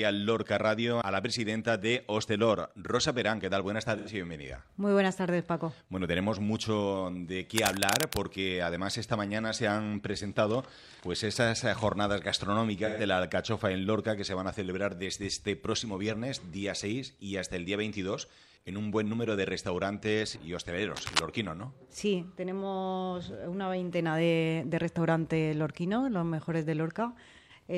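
At 3.98 to 4.09 s, AAC frame loss with concealment produces a brief smeared, noisy patch. The gap of about 85 ms points to two lost frames that the decoder rebuilt from the last good spectrum. On a spectrogram this shows as a blurred block where fine detail goes soft.

From 7.55 to 8.23 s, cable scratch noise lays dense, uneven scratching over the sound at roughly its own level. It is likely caused by a worn cable or connector being moved. It appears as ragged broadband vertical streaks and jagged waveform spikes.

The same concealment returns at 12.85 to 13.01 s, lasting about 128 ms, which suggests three lost frames. It gives a longer smeared, phasey stretch.

Scratching recurs more briefly at 20.95 to 21.21 s, again with irregular broadband streaks.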